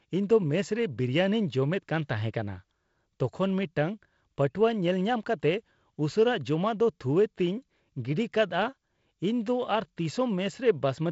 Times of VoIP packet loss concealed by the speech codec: none

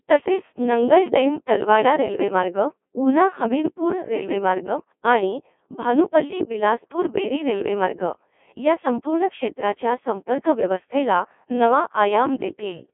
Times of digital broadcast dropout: none

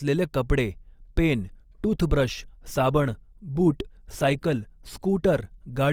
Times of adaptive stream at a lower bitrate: 1.38-5.92

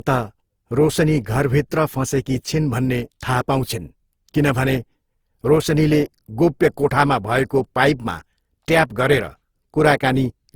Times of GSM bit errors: none

